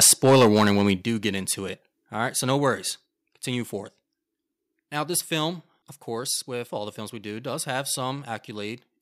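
Right from 0.01 s to 0.92 s the speech sounds crunchy and harsh on the loud syllables. That's microphone overload, likely from input gain set about 10 dB too hot, so the converter flattens a fair chunk of the peaks. Layered on that are three sudden drops in level, each likely the call software stepping the microphone volume down: about 3 dB at 0.03 s, a bigger cut of about 8 dB at 1.02 s just before "get into it", and about 4 dB at 3.06 s right after "right so no worries".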